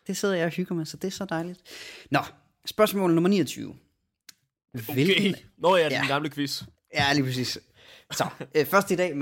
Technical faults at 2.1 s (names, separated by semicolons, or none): none